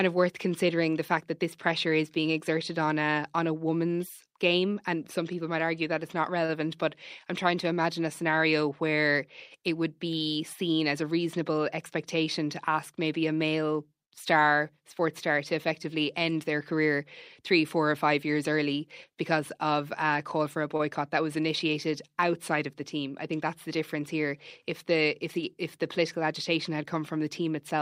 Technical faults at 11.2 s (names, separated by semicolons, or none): jitter buffer speed-up